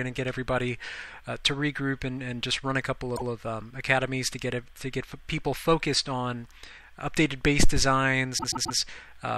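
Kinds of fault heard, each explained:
Repeated frames: the decoder plays the same short stretch again, heard as a stutter. At 3.15 s a 157 ms block sounds twice; at 8.37 s a 131 ms block sounds four times in a row. Unlike a dropout, nothing goes missing; time is added.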